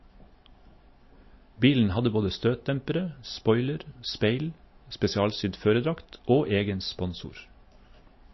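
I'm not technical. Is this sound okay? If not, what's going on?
No. The recording was likely squeezed hard by MP3 compression, which saves space by throwing away detail the encoder judges least noticeable. Here it discarded everything above about 5.8 kHz and dropped quieter detail unevenly, from the start to the end of the clip. The speech therefore sounds dull and muffled, with a watery, swirling quality, and hissy sounds like s come out smeared or metallic.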